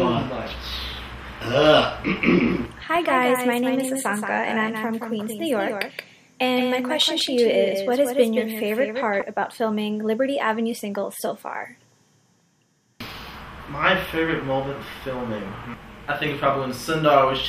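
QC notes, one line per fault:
2.16–9.22 s, doubled audio track: likely a second, slower capture path mixed in alongside the main one, so a full-band copy trails about a fifth of a second behind, roughly 5 dB down, with no decay or room colour, starting and stopping abruptly.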